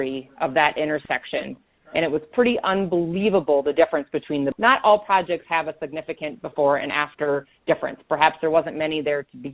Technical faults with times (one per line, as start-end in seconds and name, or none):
4.52-4.54 skip ahead
4.56-9.41 jitter buffer speed-up